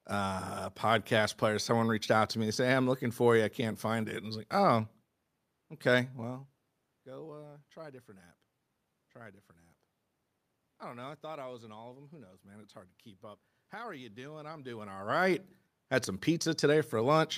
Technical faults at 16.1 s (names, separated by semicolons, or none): none